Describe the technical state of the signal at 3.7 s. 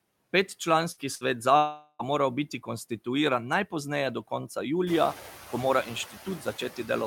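At 3.7 s the signal carries noise suppressor artifacts, present throughout the clip. The suppressor pulls down bands it judges to be steady noise by about 10 dB, frame by frame, so the background dips in pauses and returns beneath the speech.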